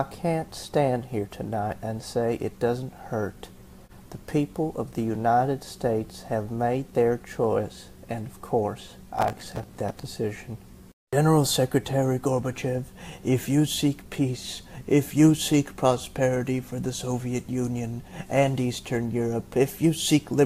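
From 9.19 to 10.03 s, processor overload crackle: missed deadlines on buffers of around 5 ms repeat stale audio, tearing gritty, showing as dense vertical streaks.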